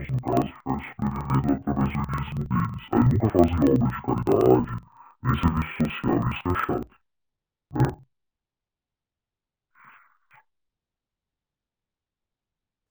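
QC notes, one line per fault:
Throughout: interleaved audio read as planar. The speech sounds an octave low, doubled and choppy, while its overall pace stays normal. Alternating left and right samples are being split so that the first half of each block plays as left and the second half as right. Each half therefore plays at half speed, and the two play at once. The chop repeats about every 46.4 ms (21.5 Hz), which fits a 2048-sample block.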